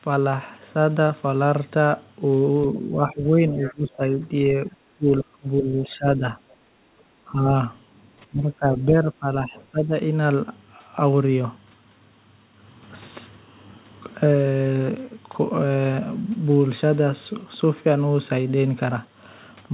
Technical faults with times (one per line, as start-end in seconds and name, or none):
2.63-6.36 speech suppressed in double talk
3.64-3.72 other side's voice leaking through
6.64-7.01 background gated by the echo canceller
7.29-7.49 speech suppressed in double talk
8.29-9.92 speech suppressed in double talk